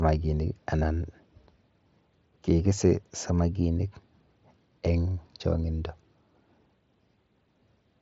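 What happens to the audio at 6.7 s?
Nothing goes wrong at 6.7 s: the speech there runs on intact, carried through the mSBC Bluetooth headset codec with its content stopping around 7.7 kHz.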